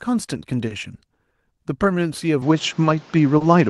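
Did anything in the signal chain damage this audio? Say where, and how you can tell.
Yes. There were short stalls from late packets in the network jitter buffer. At 0.67 s and 3.38 s the sound is held for 30 ms, then resumes. Nothing is lost.

At the input stage, from 2.42 s, the band stops at 7.4 kHz. The level shifts about 5 dB. New noise sits about 30 dB down. The likely cause is an input switched to a poorer device.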